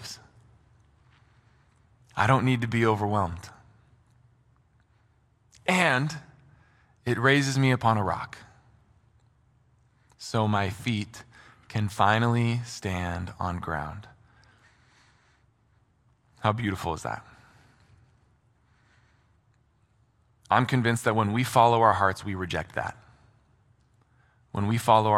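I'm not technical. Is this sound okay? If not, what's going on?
Yes, no technical faults can be heard anywhere in this speech recording, so there's nothing going on that needs fixing.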